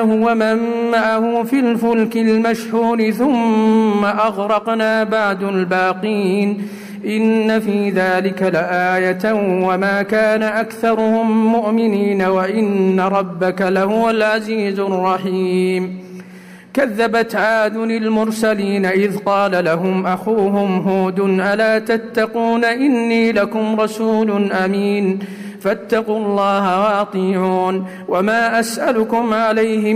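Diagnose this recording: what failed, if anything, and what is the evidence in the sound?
Nothing failed; no stage shows any audible fault.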